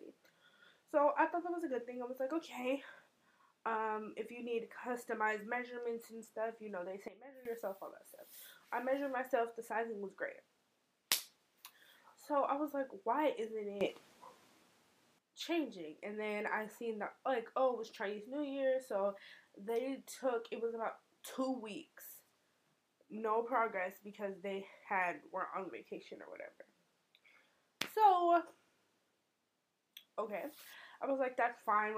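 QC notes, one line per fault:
7.08–7.45 s, sudden gain jump: sound and background noise drop together by about 15 dB in one step with no ramp, likely from an abrupt digital gain change, unlike a gradual fade or compressor action.
13.81–15.19 s, sudden gain jump: sound and noise floor step up about 12 dB at once, then step back, likely an instant gain setting change rather than louder source material.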